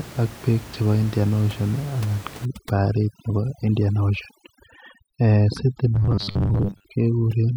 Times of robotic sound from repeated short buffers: 5.95-6.89

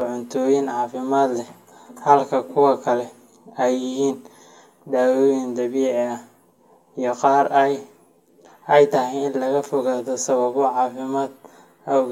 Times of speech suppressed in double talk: none

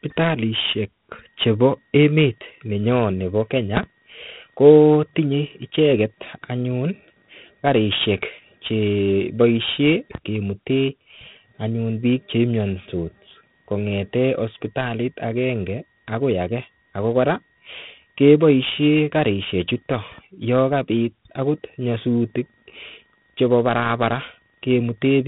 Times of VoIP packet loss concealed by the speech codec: none

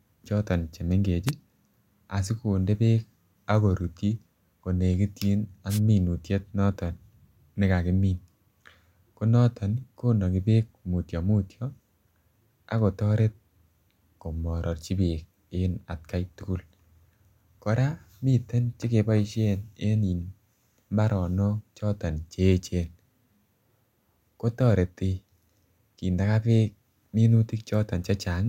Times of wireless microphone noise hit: 1.26-1.31, 5.69-5.80

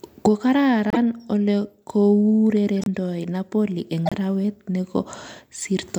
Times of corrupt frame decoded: 0.90-0.97, 2.82-2.87, 4.06-4.13

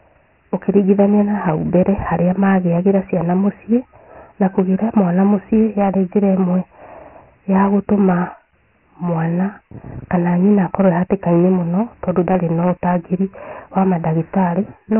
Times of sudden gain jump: none

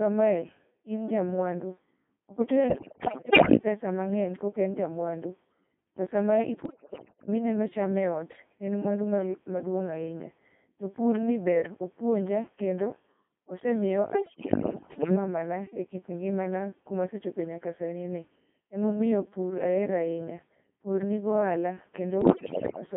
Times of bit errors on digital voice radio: 2.70-3.57, 6.65-7.27, 14.10-15.15, 22.21-22.81

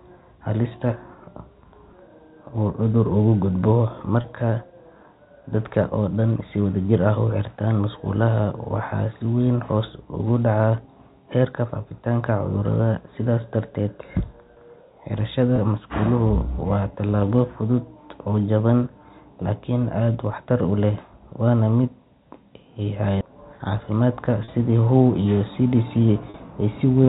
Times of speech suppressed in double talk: none

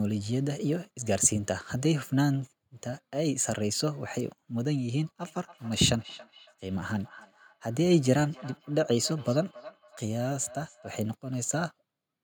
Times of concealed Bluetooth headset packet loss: none

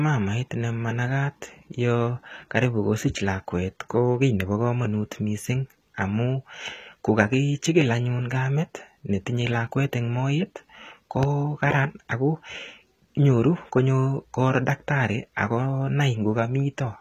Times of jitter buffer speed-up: none

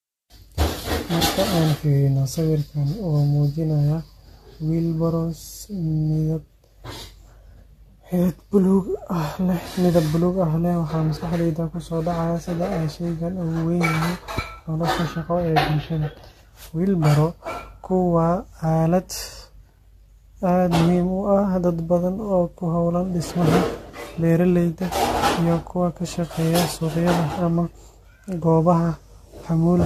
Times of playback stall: none

